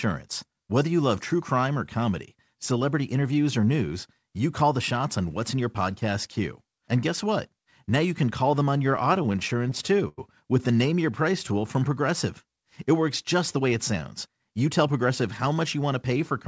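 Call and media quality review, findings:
Repeated stalls (stutter), 8.78–10.19 s. Speech drags and stutters through a rapid series of holds, longest about 95 ms, roughly 17% of the span. Jitter buffer underrun: late packets, last sound stretched and faded until audio resumed. Nothing audibly lost.

Jitter buffer speed-up, 13.59–14.27 s. Speech runs at 104% with pitch unchanged. The buffer held excess audio and trimmed repeated pitch-period slices, a few tens of ms in total. Band limit at 8 kHz fits G.722.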